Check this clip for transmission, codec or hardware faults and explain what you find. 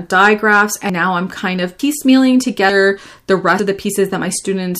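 The clip has one kind of fault, audio missing between chunks, at 0.89 s, just before "now I'm kind of", and at 1.79 s, just after it. Each is an abrupt skip of about a tenth of a second with the two sides butted together. The 0.9 s spacing points to chunked processing, likely dropping material at each chunk boundary.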